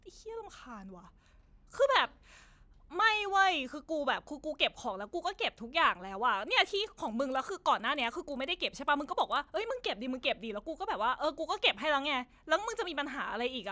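Speech, with a resampler restarted on every block from 6.4 to 9.6 s: converting 48 kHz to 16 kHz in 40 ms blocks leaves an error at each edge, giving a 25 Hz buzz. Unlike mains hum, it is present only while sound is.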